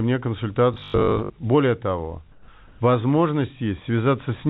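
Speech with two faults. From 0.74 to 1.34 s the speech turns into a rigid, metallic buzz at 50 Hz: robotic sound from repeated short buffers. The likely cause is audio arriving too seldom, so the receiver keeps replaying the last 20 ms, the length that gives a 50 Hz buzz. About half the material in that stretch is repeats, so real audio is skipped while the buzz still loosely tracks the speech. Comfort noise in place of the background appears twice, from 2.32 to 2.48 s (160 ms) and from 2.68 to 2.80 s (120 ms). The background sits about 30 dB below the loud parts. In these gaps its detail gives way to a flat, steady hiss, about 2 dB quieter in the first and about 3 dB louder in the second. This points to discontinuous transmission, with the receiver inserting synthetic noise of the RFC 3389 kind while the sender's voice detector heard no speech. The call path's narrow band, with nothing above 4 kHz, fits G.711 mu-law at 64 kbps.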